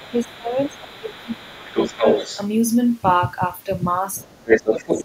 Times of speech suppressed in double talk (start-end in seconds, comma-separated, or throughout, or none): 0.10-2.05, 4.24-4.54, 4.81-5.05